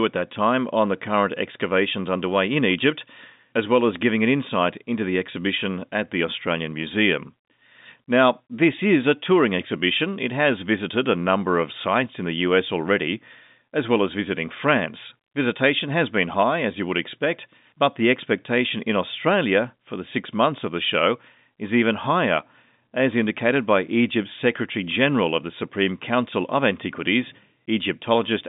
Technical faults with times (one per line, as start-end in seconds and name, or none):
none